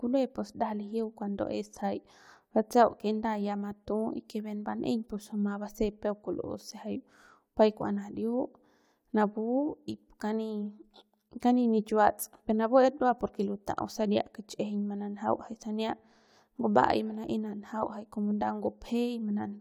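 No audible technical faults.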